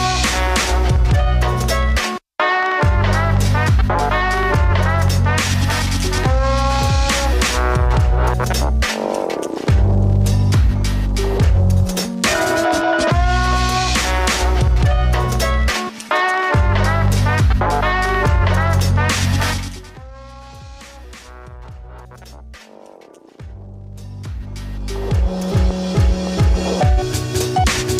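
From 23.85 to 25.40 s a rapid ticking, a zipping texture, rides on the audio while its level shifts by around 20 dB. This is zipper noise: the gain moves in coarse, unsmoothed steps, about thirty a second, each step leaving a small click.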